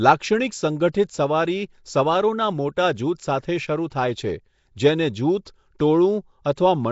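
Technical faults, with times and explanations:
Throughout: Nellymoser compression. A rough, hissy halo and a smeared, underwater quality sit over the whole clip, and there is nothing above 7.7 kHz. The damage is plainly audible and is likely from the Nellymoser Asao codec, at a rate that sounds near 32 kbps. With a fixed two bits per sample across short blocks, weak bands get no bits and are replaced with noise. That substitution produces the grainy wash and the blurred speech texture.
3.9 s: pre-echo. A brief hiss of about 15 ms arrives just ahead of a sharp onset, which then lands soft and smeared instead of crisp. The transform codec spreads its quantisation noise evenly over a whole block. Because this attack falls late in its block, noise scaled to the loud onset also fills the quiet instant before it, where nothing masks it.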